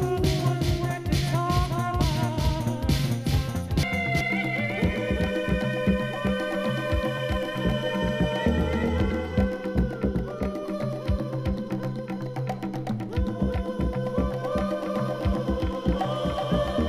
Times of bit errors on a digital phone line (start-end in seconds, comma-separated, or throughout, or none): none